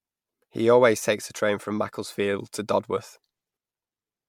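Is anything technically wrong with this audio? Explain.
Yes. Generation loss runs throughout the speech clip, from start to finish. The likely cause is repeated lossy coding: the audio seems to have been decoded and re-encoded about five times with an MP3-type codec, at rates that sound near 100 kbit/s. Each pass quantises the signal again on a shifted frame grid, so noise and spectral gaps build up. The result is swirly, hollow and smeared, worse than one encode at that rate, with softened consonant attacks.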